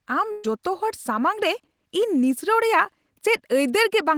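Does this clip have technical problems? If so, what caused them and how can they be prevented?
Yes. From 0.31 to 0.45 s the speech smears into a held, fading sound for about 120 ms, then picks up with roughly 130 ms missing. This is a burst of packet loss: the receiver stretched the last audio across packets that never arrived. Forward error correction or redundant packet transmission would prevent it.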